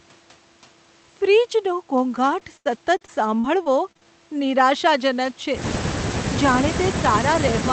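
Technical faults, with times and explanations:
2.39–4.05 s repeated packet loss (robotic sound): a rapid run of dropouts, up to 82 ms each, is patched by stretching the preceding sound, leaving choppy speech with pieces missing.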